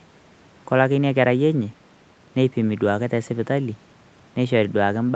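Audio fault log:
Nothing stood out on listening to this speech, which comes through the call path with its highest content stopping around 8 kHz.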